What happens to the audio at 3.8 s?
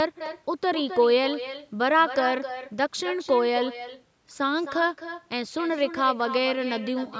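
The speech at 3.8 s carries an echo with no canceller, present throughout the clip. The far end's loudspeaker feeds its microphone and the returning signal arrives around 300 ms late, about 12 dB down, as a thinner copy trailing each syllable.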